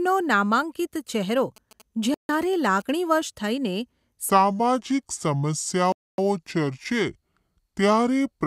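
From 1.56 to 3.14 s, GSM signalling bursts from a nearby 2G phone are rectified by the audio circuit. They form a galloping pattern of short 217 Hz buzzes about 25 dB below the speech. A steady mains hum would not stutter in clusters like this.

At 2.14 to 2.29 s and again at 5.92 to 6.18 s, the sound cuts to silence for 0.15 s and then 0.26 s. This is likely a Bluetooth stall, where the headphone buffer ran dry while delayed packets were resent.

From 4.3 s to the end, the speech plays at 0.70 times its speed and sounds about seven semitones deeper and slower. Pitch and tempo drop together, so this is likely a section at the wrong speed, played against the wrong clock, rather than a pitch shift alone.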